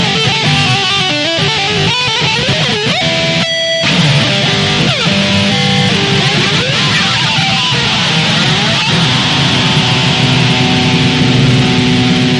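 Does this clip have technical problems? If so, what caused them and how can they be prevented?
No, there are no technical problems to prevent here.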